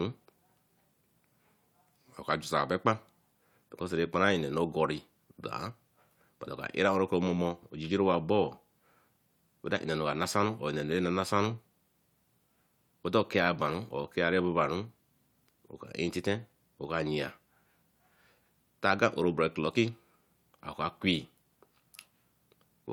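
No technical faults are audible anywhere in the speech recording.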